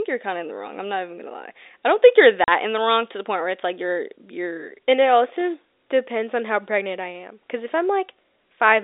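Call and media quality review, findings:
Hard-edged 40 ms dropout in the speech at 2.44–2.48 s. Packet loss filled with silence: the receiver played silence for the missing audio. The length fits two consecutive 20 ms packets. Component: network path or jitter buffer. The G.711 telephone band stays audible around the gap.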